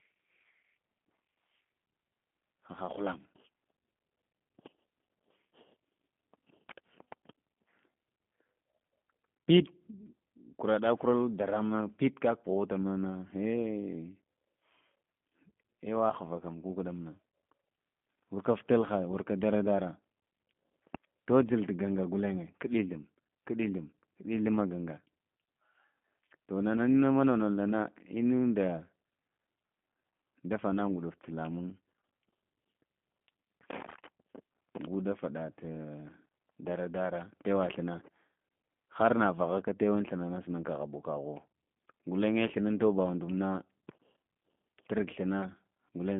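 From start to end, the speech carries G.729 codec damage: the line passes only about 150 Hz to 3.5 kHz, and the plainly rough, synthetic texture, rebuilt from a vocal tract filter and sparse pulses, fits an 8 kbit/s G.729A link. Simple band-limiting would sound muffled but stay smooth.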